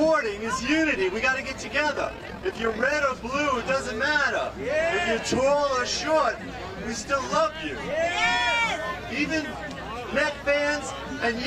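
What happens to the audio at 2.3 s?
Overlap-add ripple, 1.95 to 2.95 s: mis-overlapped frames pulse level about 6 dB near 40 Hz, a fast flutter seen as regular waveform envelope dips.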